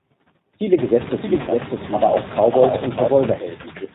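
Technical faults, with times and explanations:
Throughout: noise suppressor artifacts. The suppressor pulls down every band it judges to be steady noise, by about 18 dB, frame by frame, so the background dips between phrases and swells under the speech, most noticeably after the room noise rises near 1 s.
Throughout: G.729 codec. The speech passes through an 8 kbit/s G.729-type codec that rebuilds it from a vocal tract filter, a pitch predictor and a few pulses per frame, with nothing above 4 kHz, leaving the voice plainly rough, synthetic and band-limited.
1.41–1.49 s: VoIP packet loss concealed by the speech codec. About 60 ms of audio went missing, and the decoder filled the gap by extending its last pitch and filter settings at falling gain, producing a brief, fading smear before the speech recovers.
3.61–3.95 s: speech cut by the noise suppressor. The suppressor mistook the quiet tail of the speech for background and turned it down along with the noise, by up to about 13 dB over roughly 0.3 s, so the final sounds come out swallowed and faint.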